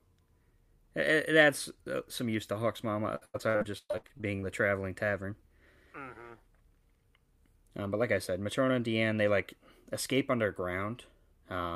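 Speech with repeated packet loss (robotic sound) from 3.15 to 4.44 s. Gaps up to 110 ms are patched by extending earlier sound, so it turns choppy rather than dropping to silence.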